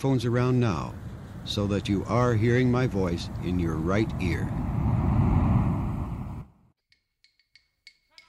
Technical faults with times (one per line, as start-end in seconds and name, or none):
6.41-6.46 stream segment skipped